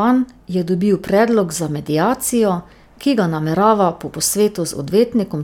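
Nothing stood out on listening to this speech recording.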